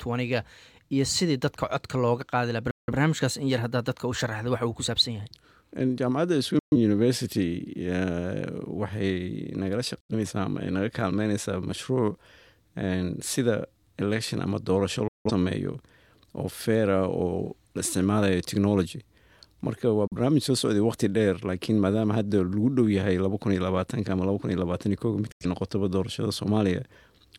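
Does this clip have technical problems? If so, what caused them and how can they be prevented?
Yes. Digital broadcast dropouts mute the sound six times: 2.71–2.92, 6.59–6.76, 10.00–10.14, 15.08–15.31, 20.07–20.16 and 25.32–25.46 s. Each gap fades out in about 3 ms. The missing stretches come in steps of about 43 ms, which fits whole corrupted frames being discarded. A stronger, steadier signal at the receiver would prevent this.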